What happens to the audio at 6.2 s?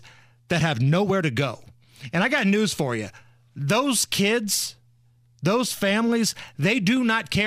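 Nothing goes wrong at 6.2 s; the speech carries on intact through that moment.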